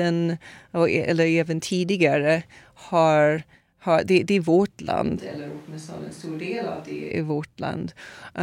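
From 5.17 to 7.11 s the speech suddenly turns roomy and hollow, about 10 dB quieter, with less bass and room noise roughly 25 dB below it: likely a switch to a distant microphone. The waveform shrinks abruptly. The spectrogram shows weaker lows, a raised noise floor and smeared tails.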